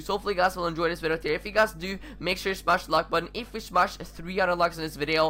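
Mains hum runs throughout: a ground loop or nearby transformer couples the 50 Hz supply into the signal, giving a steady low drone about 20 dB below the sound, a constant horizontal line on the spectrogram.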